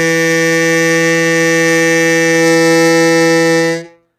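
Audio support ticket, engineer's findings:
Music, throughout: treble bright but gritty and metallic, harmonics not lining up with the lower band. Hard ceiling, nothing above 14.9 kHz. Likely HE-AAC compression: lower spectrum coded, upper bands rebuilt by spectral band replication from copied lower bands under a coarse envelope. Plainly audible damage fits a low bitrate around 20 kbps.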